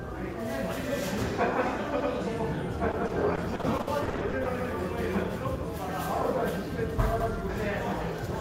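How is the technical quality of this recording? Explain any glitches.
The recording has two kinds of timing fault.

Overlapping chunks at 2.00, 4.60 and 7.20 s: each 2.5 s block restarts 100 ms early, so that slice replays and gives a regular stutter.

Repeated packet loss (robotic sound) from 2.91 to 4.47 s: about a dozen short gaps, the longest 60 ms, are patched by extending earlier sound, giving choppy audio with pieces missing.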